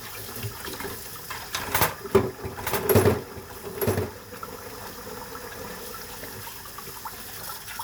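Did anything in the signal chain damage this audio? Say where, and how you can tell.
Yes. From 2.59 s to 6.49 s a doubled audio track runs underneath the sound: a second, full-band copy trails the original by about a second, roughly 5 dB quieter, and it switches on and off abruptly at those times. The likely cause is in capture or editing, where a slower second path or a misaligned edit mixes in a duplicate. Unlike an acoustic echo or reverb, the copy repeats only once, with no decay tail and no room colouration.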